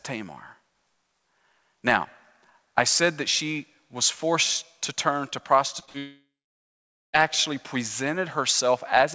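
Speech clip in which, just after "forced to turn to", the audio starts to smear and wobble at 5.80 to 5.83 s, 5.85 to 5.89 s and 5.89 to 5.96 s. This is short concealed packet loss. Each gap of about 20 to 40 ms never reached the decoder in time, and the receiver covered it by extending the preceding sound before blending back into the real signal. Right after, from 5.98 s to 7.15 s, the sound turns into a fading buzz or hiss and then goes quiet for nearly 0.9 s. It resumes further on with that stretch missing. This is a long network dropout: the likely cause is that no packets arrived for over a second, so the concealment could only carry the last sound briefly before falling silent. The audio passes through a G.722 call path, with nothing above 8 kHz.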